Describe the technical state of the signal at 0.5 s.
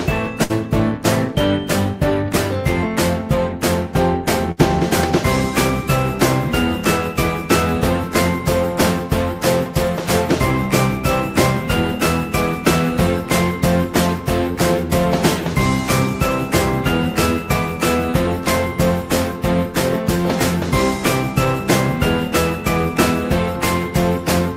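At 0.5 s there is a burst of packet loss, running from about 0.43 to 0.52 s. A short run of audio never arrived in time, so the receiver filled roughly 61 ms by extending the last sound it had and letting it fade, which is heard as a smeared, dying continuation rather than fresh audio. When playback picks up again, about 60 ms of the original sound has been skipped, leaving a small jump forward.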